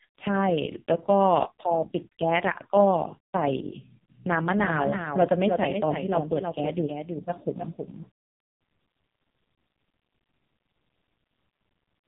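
Throughout, the speech has passed through the AMR narrowband mobile codec at a very low rate, consistent with its lowest 4.75 kbps mode. Nothing above 3.8 kHz survives, so it sounds dull and telephone-thin, and the sparse pulse model makes voicing buzzy and heavily synthetic.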